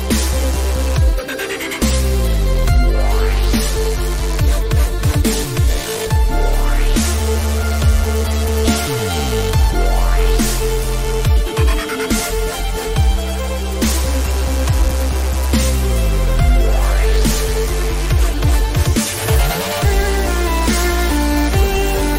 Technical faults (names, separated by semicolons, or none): none